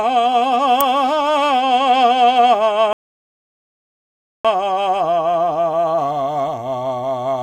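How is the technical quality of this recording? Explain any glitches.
Two glitches stand out in this music recording, a single snap early on and a dropout in the middle.

At 0.81 s there's an electrical switching spike: one sharp, tight snap laid over the music. It's likely a nearby switch, motor or static discharge arcing briefly and the audio line picking that burst up.

From 2.93 to 4.45 s you get a rebuffering stall. The music cuts to silence for about 1.52 s, then carries on exactly where it stopped. The player ran out of downloaded audio and waited for more, so nothing's missing, but the gap stretches the timeline.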